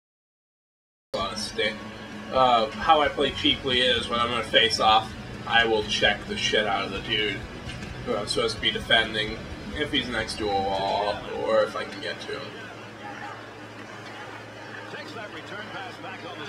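Cut-off start at 1.14 s: capture began late, so after digital silence the sound enters mid-event, abruptly, with no natural attack or fade-in.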